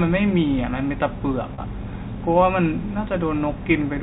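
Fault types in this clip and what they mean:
Packet loss with pitch repetition: At 1.54 s about 40 ms of the speech drops out, which fits two lost 20 ms packets, and the receiver fills the hole by looping the last pitch period, so the sound briefly holds on one buzzy tone before fading back into the speech. On a spectrogram this shows as flat, evenly spaced harmonic lines frozen across the gap; the waveform shows one cycle copied end to end under a falling envelope.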